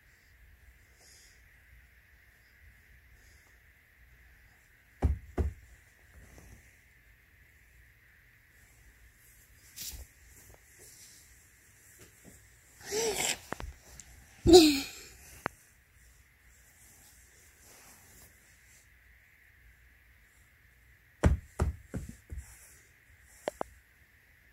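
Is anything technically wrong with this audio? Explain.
Yes. There are loud pops: paired pops at 13.53–13.63 s and 23.48–23.63 s, and a single pop at 15.46–15.48 s, each around 20–25 dB above the sound. They are likely voltage pulses, such as from a plug or switch, shaped by the circuits after them. Unlike a dropout, the sound continues beneath each thump.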